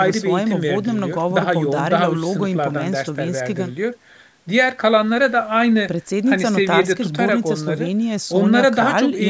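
No technical faults can be heard in this speech. It has passed through a call's microphone processing, which trims the lowest bass and leaves nothing above 8 kHz, as that path normally does.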